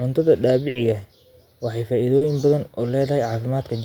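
From 0.69 to 0.77 s, the last sound is held and fades away before the speech jumps ahead: a burst of packet loss, about 60 ms of audio never arriving and being stretched over. At 2.17 to 2.23 s a brief smear interrupts the speech, short concealed packet loss, where the receiver patched a 40 ms hole by extending the preceding sound.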